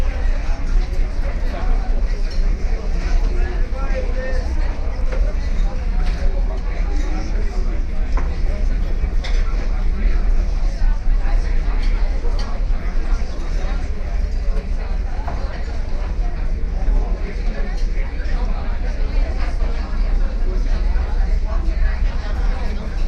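A recording of everyday sounds, with nothing technically wrong with it.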